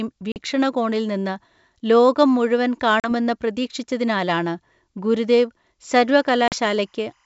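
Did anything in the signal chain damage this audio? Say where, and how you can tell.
Yes. Packet loss on an ADPCM call, at the network stage, appears at 0.32 s, 3.00 s (between "നിന്ന് ലോകം മുഴുവൻ" and "പ്രതീക്ഷിച്ചതിനാലാണ് ഗുരുദേവ്") and 6.48 s. Each gap is a hard-edged 40 ms silence, which fits a couple of lost packets. The decoder's predictor and step size then drift from the sender's, so the speech resumes briefly slightly distorted.

Timecode bleed, from analogue wiring, runs from 5.88 s, just after "പ്രതീക്ഷിച്ചതിനാലാണ് ഗുരുദേവ്", to the end. A faint chirping warble sits about 45 dB below the speech, flipping between pitches near 1 and 2 kHz. That is a 25 frame/s square-wave code leaking from an adjacent track or cable.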